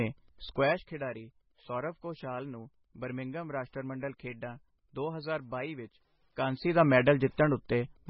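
Speech is affected by three faults. Wi-Fi interference adds faint ticking about ten times a second, every 102.4 ms and well below the voice, seen on a spectrogram as evenly spaced thin vertical lines. The audio also sounds watery and swirly, with smeared consonant attacks and a hard treble cut at 5.6 kHz. This is likely heavy MP3 compression at a very low bitrate, around 16 kbps, and on a spectrogram it shows as a flat ceiling with flickering patchy blocks below it. From 6.26 to 6.83 s, zipper noise rides on a level change of roughly 15 dB applied in about a hundred small steps a second, which appears on the waveform as a staircase envelope with tiny clicks at each step.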